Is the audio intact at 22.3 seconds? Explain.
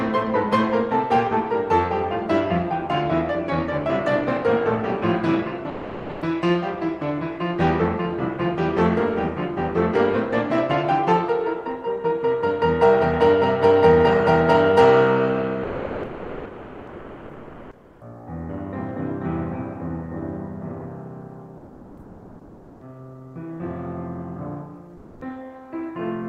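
No. From 21.57 to 22.81 s the background is replaced by comfort noise. The real ambience gives way to a steady, featureless hiss, about 2 dB different in level. This is likely discontinuous transmission, which paused sending during quiet music and synthesised noise instead.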